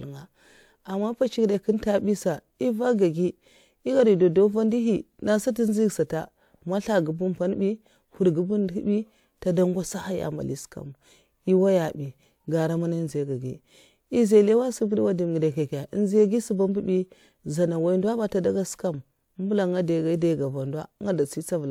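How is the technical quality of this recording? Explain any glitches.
Careful listening to the speech turned up nothing technical that stood out as a problem.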